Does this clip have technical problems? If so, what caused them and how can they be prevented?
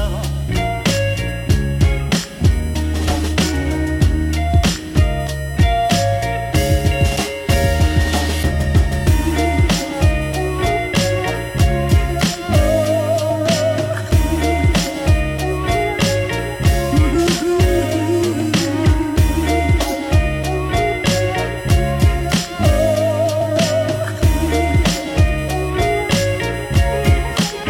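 Yes. A USB whine runs through the whole clip: a fixed-pitch tone on a 1 kHz grid, with its strongest component high up at 17 kHz, about 25 dB below the sound. The bus's 1 ms frame activity pulls current in bursts that leak into the audio through shared power or ground. Mains hum sits at 50 or 60 Hz, and this tone's harmonics fall instead on exact 1 kHz multiples. Prevent it with an isolated or separately powered audio interface.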